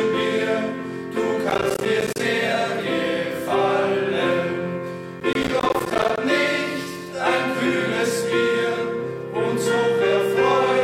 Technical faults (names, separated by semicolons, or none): processor overload crackle